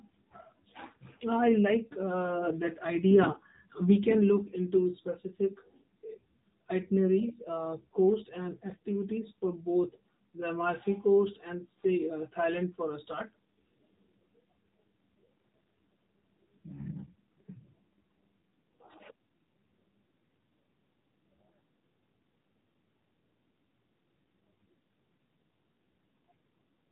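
Buzzy, synthetic speech throughout, with nothing above 3.8 kHz: the AMR narrowband mobile codec at a low mode, fitting 7.4 kbps, starves its vocal-tract model of bits.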